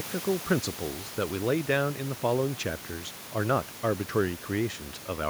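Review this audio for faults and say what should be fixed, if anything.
Nothing needs fixing: no system faults turn up anywhere in the speech.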